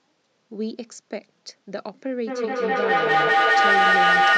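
A speech clip where, from 2.27 s to the end, each word returns about every fifth of a second, thinner and ringing, building up to about 11 dB above the speech. This is feedback echo between two devices: a second device in the room replays the call into this microphone, beyond its echo canceller's reach.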